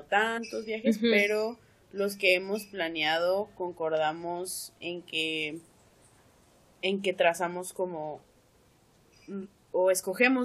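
Compressed frames were skipped twice: whole coded frames were missing or rejected by the decoder, so playback jumps ahead by roughly a tenth of a second, which suggests a handful of frames each time. At 0.37–0.39 s and 9.45–9.47 s the sound lurches forward.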